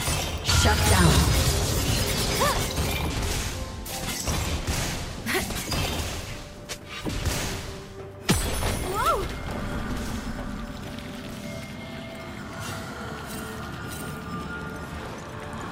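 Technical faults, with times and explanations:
5.68–13.68 s, crude rate conversion: a gritty, inharmonic fizz rides on the sound and follows its loud and high parts. Samples were repeated with no smoothing filter, which fits a 44.1 kHz to 48 kHz nearest-sample conversion. That makes a regular timing error, heard as shifted, inharmonic copies of the content, roughly 20 dB below it. Clipping distortion only crunches on peaks and adds harmonically related grit; this haze persists at moderate levels and sits off-key.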